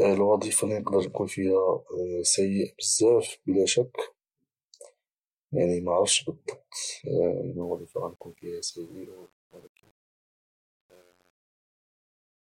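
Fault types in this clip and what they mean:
Truncation distortion on a fade: the speech fade-out starting around 7.6 s gets grainy because the gain stage is dropping low bits with no dither, which fits roughly 8-bit resolution. As the level sinks, the waveform collapses into coarse square steps. From about 8.3 s to the end it turns gritty.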